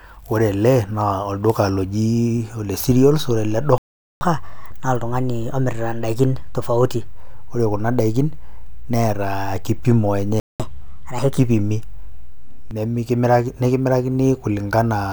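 At 2.92 s, just after "olduka loji ole", a DC step shifts the waveform's zero line to a new offset, heard as a low thump under the speech. The offset holds until 12.71 s, where the line steps back with a second thump.

From 3.78 to 4.21 s the player was likely starved of data or blocked, a playback stall that cuts the speech mid-flow for 430 ms of silence. At 10.40 s the same likely cause produces a second stall, a 198 ms gap that ends at 10.60 s.

After each gap, the player resamples its backlog to win back the lost time, a catch-up at higher speed. From 4.21 to 7.08 s the audio runs 1.15 times fast, raised by about two semitones. From 10.60 to 11.39 s it runs 1.25 times fast, about four semitones high. Each time, speed and pitch then drop back to normal.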